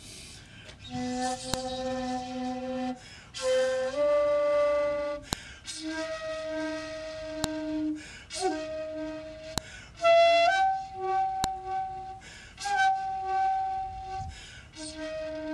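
Sharp, loud clicks snap through the sound at 1.54, 5.33, 7.44, 9.58 and 11.44 s, each over in a couple of milliseconds and equally abrupt no matter what the surrounding audio is doing. This is a file header played as audio: separate WAV pieces were joined or streamed with their headers left in, so each block of header bytes is read as sample values, and a burst of arbitrary data marks where each new piece begins.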